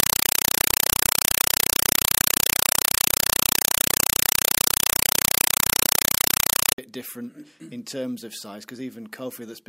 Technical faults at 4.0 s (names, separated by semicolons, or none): compressed stream played as audio